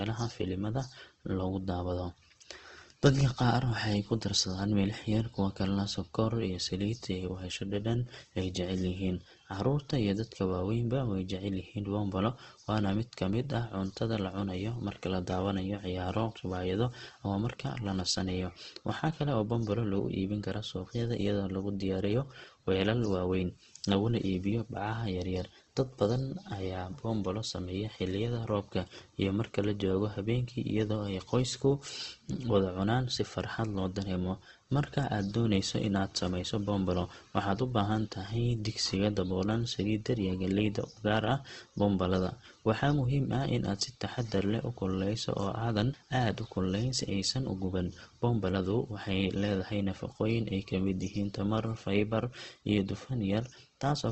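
A speech clip with Opus compression damage throughout. Nothing is present above about 8.2 kHz, so the sound is dull and lacks air. Within that range the damage is plainly audible. Sounds turn rough, grainy and noisy rather than swirling. This fits the encoder's music mode, which fills starved bands with folded or noise content. The narrowed bandwidth and plainly audible artefacts point to a low bitrate, likely around 16 kbps.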